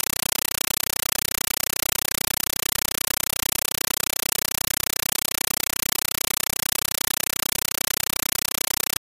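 Compressed stream played as audio runs from start to finish: the whole clip is chattering static, with bursts of noise about 8 ms long repeating 31.25 times a second, each followed by a gap. This happens when an AC-3 (Dolby Digital) bitstream sent over a digital link is treated as ordinary samples instead of being decoded. Each coded frame comes out as a noise burst padded with silence, and the burst pattern points to a 384 kbps stream.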